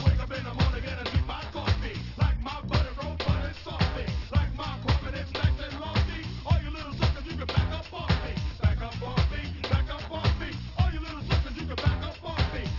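Aliasing runs through the whole clip. The sound was resampled without a low-pass filter, which fits a drop to a 12 kHz rate, so energy above 6 kHz folds back to false pitches, roughly 20 dB down, giving gritty, metallic highs that crowd the band edge.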